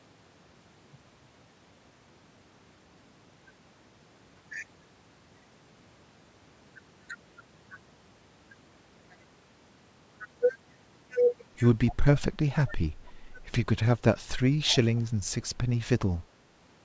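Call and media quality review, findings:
Echo leak, 11.87–12.21 s, 12.67–12.72 s, 14.69–15.01 s: faint delayed copy of the speech, about 245 ms late and roughly 20 to 25 dB down, likely from far-end loudspeaker pickup that the echo canceller did not fully remove.

Speech suppressed in double talk, 11.92–11.97 s, 12.63–12.73 s, 13.06–13.11 s, 14.60–14.72 s: brief dips of roughly 10 to 20 dB as both sides overlap, likely the echo canceller mistaking the talker for echo and attenuating both.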